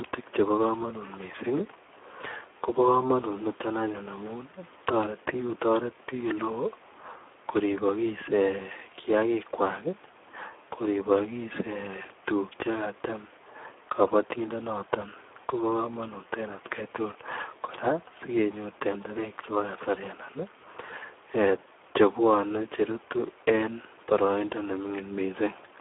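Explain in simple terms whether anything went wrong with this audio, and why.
From start to finish the speech carries heavy Speex codec damage. This older internet-calling codec was squeezed hard here, so the speech sounds hoarse, noisy and a bit robotic. Everything above about 3.7 kHz is gone, which leaves a thin, telephone-like sound.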